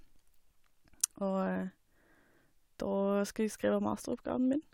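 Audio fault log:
No fault is heard in this audio.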